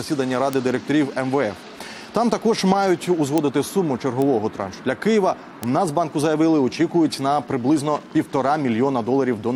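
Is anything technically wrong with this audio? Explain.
Yes. Four bit error spikes occur, at 0.53, 3.38, 4.22 and 5.63 s. Each is a single corrupted sample where one flipped bit throws the value by a power of two before it snaps straight back, peaking at about -3 dBFS, or about -9 dBFS at 4.22 s. Each is heard as one bare, broadband tick with no relation to the surrounding sound. Unlike a dropout click or clipping, nothing goes missing and no waveform is flattened.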